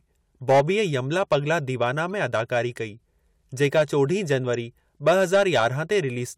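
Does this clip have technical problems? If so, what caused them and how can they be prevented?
Yes. Hard clipping flattens the speech peaks from 0.49 to 0.61 s, 1.17 to 2.57 s, 3.62 to 4.35 s and 5.07 to 5.98 s. The level overdrives a stage by about 5 to 8 dB. The cut-off tops add high harmonics, heard as crackle on peaks or harsh fuzz. Lowering the input gain to leave headroom prevents it.

A corrupt frame decoded causes a brief glitch at 2.12 s, covering about two frames, and another at 4.54 s, about one frame. The decoder played damaged frames, misplacing energy in frequency. Both are faint, the second louder. Error checking that conceals bad frames prevents it.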